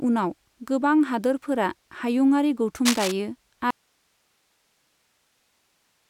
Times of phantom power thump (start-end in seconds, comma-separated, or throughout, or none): none